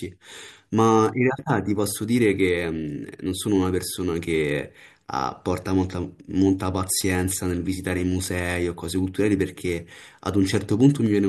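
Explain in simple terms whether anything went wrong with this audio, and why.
Nothing went wrong here: the recording's signal stays steady and intact throughout, with no technical faults to be heard at any point.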